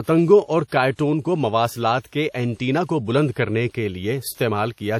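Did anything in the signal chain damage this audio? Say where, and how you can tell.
Yes. Throughout the speech there is a ringing, washy quality, with hiss that swells and fades along with the signal, and nothing above 18 kHz. This is likely WMA compression at the codec stage. Long transform blocks smear quantisation noise over tens of milliseconds, consistent with roughly 48 kbps.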